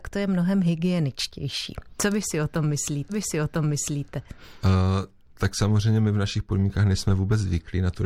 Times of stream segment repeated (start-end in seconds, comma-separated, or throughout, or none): 3.09-4.09